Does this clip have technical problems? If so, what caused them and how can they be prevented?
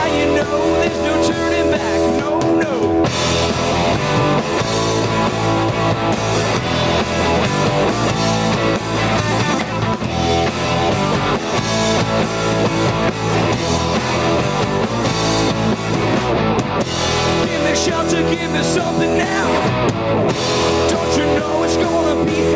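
Yes: gain pumping throughout, with the gain swinging about 5 dB under loud sounds. Unlike a noise gate's abrupt cut, it breathes smoothly. Likely cause: excessive microphone gain driving a fast limiter. Prevent it by lowering input gain so the limiter rarely engages.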